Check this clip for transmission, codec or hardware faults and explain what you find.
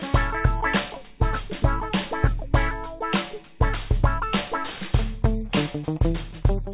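There is one fault, aliasing, present throughout the clip. The sample rate was lowered without an anti-alias filter, folding content above 4 kHz back down, which fits a drop from 44.1 kHz to 8 kHz. Spurious tones sit roughly 15 dB below the signal, sounding gritty and metallic.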